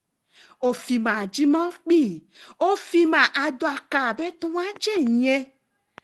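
At 0.67 s about 20 ms of the speech failed to arrive in time, and the receiver covered the hole with short concealed packet loss, extending the preceding sound for roughly 16 ms before blending back. It is heard as a brief smear or wobble.

Overlapping that, from 0.69 to 0.71 s, one packet is a lost packet rebuilt from error correction. The decoder played the low-rate copy carried in the next packet, so there is no gap. The sound just turns rougher and noisier for 20 ms. The same repair recurs from 4.13 to 4.27 s over about 80 ms, which fits four separate packets rebuilt the same way. The grain is longer there.

From 4.76 s to the end of the clip a train of clicks runs at about 3.4 per second, irregularly spaced, with peaks a little above the speech level. The clicks are alike in shape and tick over pauses too, likely from electrical interference or a faulty connection or power supply.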